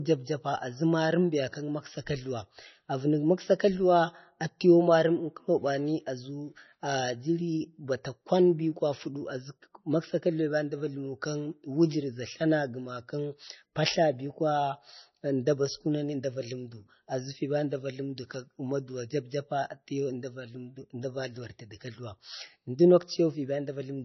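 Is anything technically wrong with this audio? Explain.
Yes. Throughout the speech, everything above 6 kHz is missing, so sibilants sound dull and the audio has the swirly, smeared texture of heavy MP3 compression, despite the file's generous size. This is likely low-bitrate audio saved at a high bitrate: the losses of a first, very lean MP3 pass, on the order of 26 kbit/s, were carried into a much richer re-encode that cannot restore them. A spectrogram shows a hard, flat ceiling at 6 kHz with blank space above.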